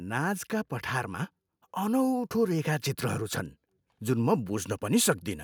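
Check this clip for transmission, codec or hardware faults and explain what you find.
One fault stands out. From 0.05 to 2.74 s, the speech and the background noise behind it swell together, growing about 4 dB louder over nearly three seconds. That is automatic gain rising: the gain control judged the input too quiet and slowly turned itself up.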